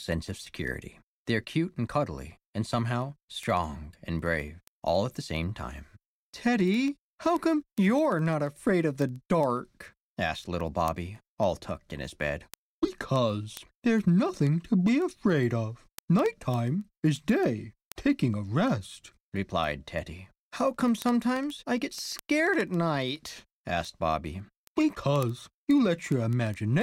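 From 0.12 s to 26.81 s, word clock ticks sound about every 70 ms, several hundred sharp clicks. The receiver's clock drifts roughly 300 ppm from the sender's, dropping or repeating one sample per slip. Waveforms show single-sample steps; spectrograms show evenly spaced thin vertical lines.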